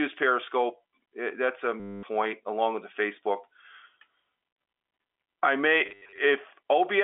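At 1.80 to 2.03 s, between "it that's a" and "along with the", the speech breaks into a robotic stutter: packet loss with the last packet repeated, 230 ms of audio replaced by copies of one short frame, with the sound pointing to 10 ms packets. The run buzzes near 100 Hz over the narrow G.711 telephone band. At 5.86 to 6.18 s, after "I may", 220 ms is lost in scattered runs of up to 80 ms.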